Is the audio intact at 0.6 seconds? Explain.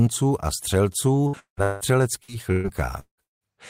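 Yes, at 0.6 seconds the speech plays through cleanly, with no dropout, click, distortion or other fault at that moment.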